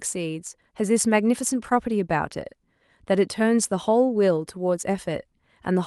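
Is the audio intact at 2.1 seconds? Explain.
Yes, the speech at 2.1 seconds is intact, with no dropout, click, distortion or other fault to be heard at that point.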